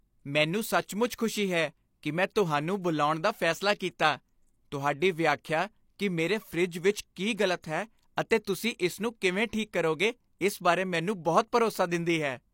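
Speech, marred by pre-echo at 7.61–7.64 s: a 31 ms hiss arrives before a sharp onset as transform-codec noise spreads across the block, unlike reverb, which trails after.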